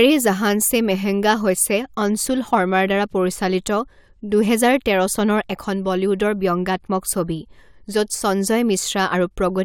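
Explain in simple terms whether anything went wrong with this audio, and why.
Nothing went wrong with this audio, because no fault can be heard anywhere in it.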